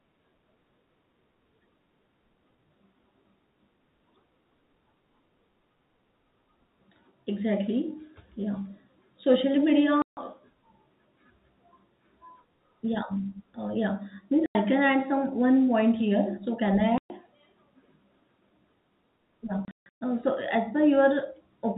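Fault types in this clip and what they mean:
Packet loss filled with silence: lost packets were replaced by silence, punching hard-edged gaps of up to 150 ms into the speech, which fits 30 ms packets.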